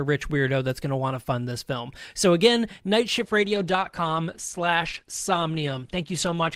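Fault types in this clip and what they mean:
Adaptive stream at a lower bitrate: the connection slowed, so playback switched to a leaner encode of the speech at 3.19 s and held it to the end. The treble abruptly thins, with nothing above 12.2 kHz, and coding artefacts become audible without any gap.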